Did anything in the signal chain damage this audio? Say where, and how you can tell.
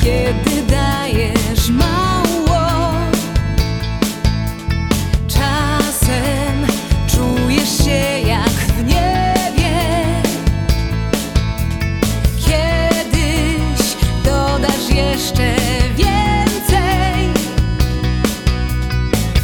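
No, nothing in the chain audibly damaged this audio.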